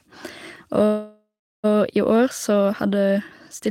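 A speech clip with a call audio freeze from 0.85 s to 1.66 s. The last sound is stretched into a fading buzz or hiss that falls to silence for about 370 ms, and the speech then resumes exactly where it stopped, now 782 ms later. That points to packets likely stalling in transit until the jitter buffer ran dry. Unlike a dropout, nothing is missing: a gap has been inserted, not speech cut out.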